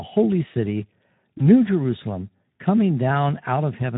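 From the start to the end of the speech, the Speex codec is clearly audible. This CELP coder has too few bits to model the excitation, so voiced sounds come out hoarse and grainy. That behaviour fits a low-rate mode around 11 kbps. On a spectrogram, the harmonic stripes look blurred and broken, with noise filling the gaps between them. The waveform's periodic cycles look rough rather than clean.

At 1.37 to 1.42 s, right after "holy city", there is a short episode of VoIP packet loss concealed by the speech codec. The decoder lost its input and filled the gap by repeating its last pitch and filter with falling gain. The result is a brief stretched sound that fades and leaves the sound weak for a moment. This fits a single lost 20 ms frame. A spectrogram shows the stretched sound fading out, and the waveform shows it shrinking in amplitude.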